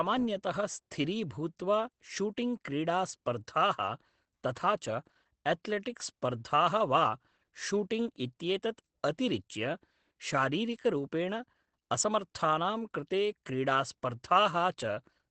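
From start to finish, the speech carries Opus voice compression, plainly audible. Nothing sounds above about 9 kHz. The bitrate points to roughly 12 kbps in SILK mode. The band is narrowed and the excitation coarsely coded. Voices sound muffled, slightly hoarse and a little robotic.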